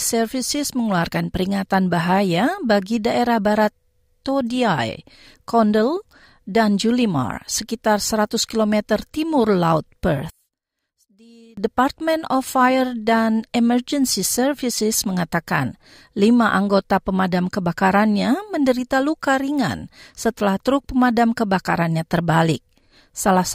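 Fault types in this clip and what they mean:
One channel inverted, 10.30 to 11.57 s: for just over a second the centred speech collapses, dropping by about 31 dB and leaving a faint trace in place of the full voice before it returns at normal level. The likely cause is reversed polarity on one stereo channel, so that when left and right are summed to mono, everything common to both cancels and only their small difference survives.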